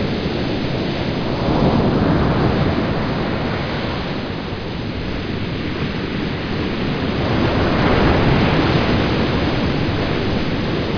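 A recording of sounds, and nothing stood out as a technical problem on listening.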